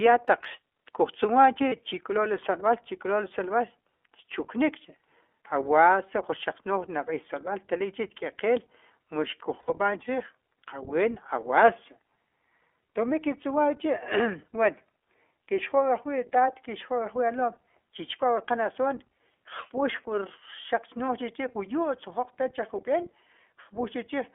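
Throughout, the speech is band-limited, thin and slightly rough and synthetic, with nothing above 4 kHz. This is the iLBC codec, coding each short frame independently. The roughness fits its 15.2 kbps mode with 20 ms frames.

At 1.68 s, a brief held, faintly buzzy vowel lasts about 40 ms, and at 9.60 s a longer one lasts about 80 ms. These are lost iLBC frames, consistent with two and four dropped 20 ms packets. The decoder repeats the last pitch cycle with added noise, and the speech recovers immediately afterward.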